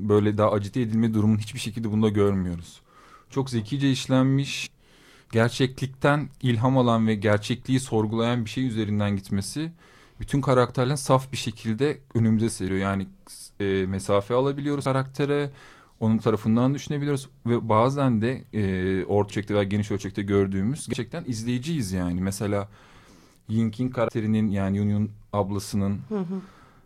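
Compressed frames skipped at 4.65 to 4.67, 14.84, 19.30, 20.92 and 24.08 s: runs of compressed frames never reach the output, so the speech jumps ahead by roughly a tenth to a fifth of a second each time.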